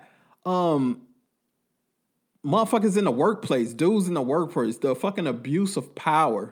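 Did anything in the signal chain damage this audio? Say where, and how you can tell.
Yes. A call bitrate drop, a fault in the call's codec stage, runs from about 0.79 s to 2.93 s, ending just before "in the workplace dudes". The speech turns coarser and rougher there. The encoder's rate fell from 64 kbps to 28 kbps after the bandwidth estimate dropped, and it stayed at its lowest for about 1.3 s. On a spectrogram that stretch shows a smeared, patchier upper band, which returns to its earlier detail as the bitrate recovers.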